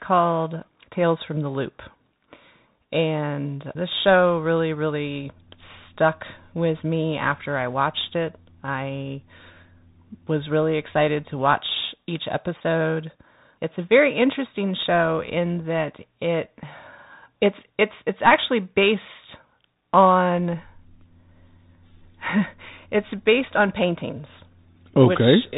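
From start to finish the speech carries the sound of a Bluetooth CVSD headset codec. Its band stops at about 3.8 kHz, leaving a boxed-in, telephone-like tone. The codec tracks the waveform one bit at a time, stepping up or down with an adaptive step, which fits a 64 kbps stream. Loud high-frequency energy outruns that step, so s sounds come out scratchy and distorted, and a granular hiss sits steadily beneath the speech.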